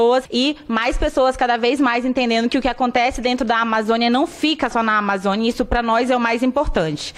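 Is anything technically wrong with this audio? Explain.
No, nothing technically wrong can be heard here.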